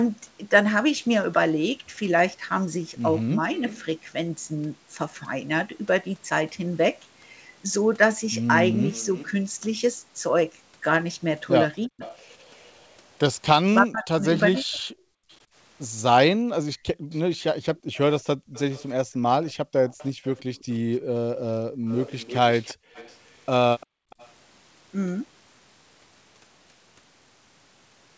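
At 3.56–3.84 s and again from 8.87 to 24.3 s, an echo canceller on a loudspeaker end likely let its own playback through, producing an echo leak: a faint copy of the speech, about 20 dB down, trailing 345 ms behind. Between 11.87 and 14.89 s, speech is suppressed in double talk as the canceller likely mistakes the talker for echo, so the voice drops by up to roughly 40 dB in pieces totalling about a second. From 15.17 to 24.1 s, the canceller clamps the microphone, and this background gating makes the room sound dip by up to about 35 dB for around two seconds in all.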